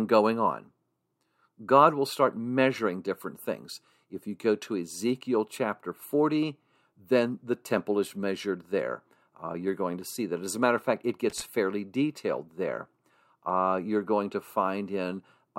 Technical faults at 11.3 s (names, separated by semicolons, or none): loose connector crackle